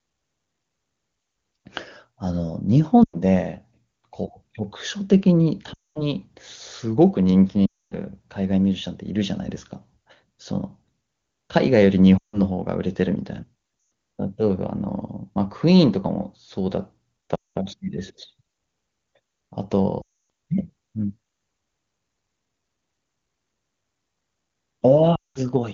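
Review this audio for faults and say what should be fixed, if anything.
Lost AMR speech frames break the speech at 3.03, 5.73, 7.66, 12.18, 13.79, 17.35, 20.02 and 25.15 s, each lasting roughly 0.1 to 0.3 s. Corrupted frames were discarded, and the decoder kept repeating the last good pitch and spectral shape while lowering the gain. The speech drops to near silence within two frames, and then returns briefly rough. A plain dropout or edit gap would cut to silence at once. Stronger radio coverage or better error protection on the link would prevent it.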